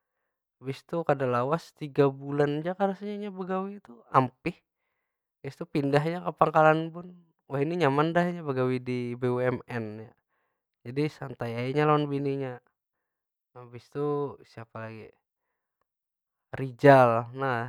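No technical faults can be heard anywhere in the speech recording. There is nothing to flag at any point in the audio.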